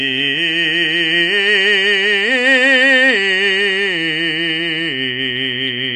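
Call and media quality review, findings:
Music track, dull and smeared for the whole clip. Hard ceiling at 9.6 kHz, nothing above. Sustained notes warble, and high detail turns fizzy. Damage plainly audible. Likely AAC compression, AAC-LC at a rate that fits about 32 kbps. The encoder dropped the top band and quantised the rest coarsely against its hearing model.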